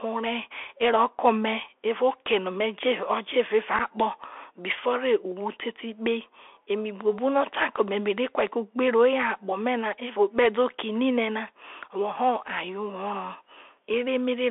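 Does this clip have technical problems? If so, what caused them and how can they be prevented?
Yes. The whole clip carries the sound of a Bluetooth CVSD headset codec. The band runs roughly from 300 Hz to 3.5 kHz, so everything above that is simply gone and the speech sounds like a phone call. The damage is plainly audible. The codec sends one up-or-down bit per sample with an adapting step, which fits a 64 kbps link, so sibilants come out scratchy and a grainy hiss sits under the speech. To prevent it, record on a wideband path such as mSBC or a wired mic rather than the narrowband headset profile.

At 3.79 s there's a short piece of unconcealed Bluetooth headset packet loss. About 7.5 ms of audio, which points to a couple of voice packets between headset and phone, just vanished, and silence or an idle pattern filled the gap with nothing to smooth it over. You hear a brief hole with hard edges, and the speech comes back quieter for a moment as the CVSD decoder recovers. 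To prevent it, keep the headset close to the phone and away from Wi-Fi or 2.4 GHz interference.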